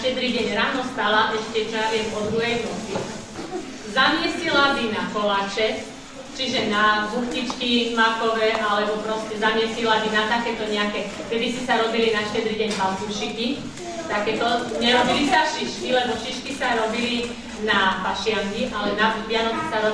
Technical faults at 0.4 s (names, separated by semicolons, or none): none